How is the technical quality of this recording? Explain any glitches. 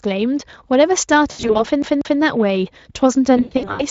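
The recording has three audible glitches: two bursts of packet loss and one CD-style skip.

From 1.31 to 1.65 s and again from 3.37 to 3.85 s there is VoIP packet loss concealed by the speech codec. With gaps up to about 80 and 100 ms, the decoder extrapolates from the last pitch and filter, so the sound turns into a buzzy, fading smear. On a spectrogram this looks like frozen, blurred harmonic bands.

From 1.82 to 2.20 s the audio behaves like a CD stuck on one turn. A 189 ms slice plays twice more with a short mute at each jump, heard as an even stutter. The waveform shows the same shape repeating with small gaps between copies.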